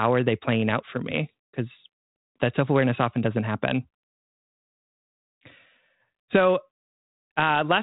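Nothing's wrong here: it's a speech recording that comes through 32 kbit/s G.726 ADPCM telephone coding with only light codec wear and nothing above 3.9 kHz, and no technical faults turn up anywhere in it.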